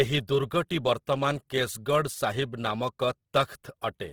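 Running the whole way through, the speech carries plainly audible Opus compression, likely from its music (CELT) mode at a low rate, about 16 kbps. Bandwidth stays full, reaching 20.4 kHz, but starved bands get filled in, so voiced sounds come out rough and grainy.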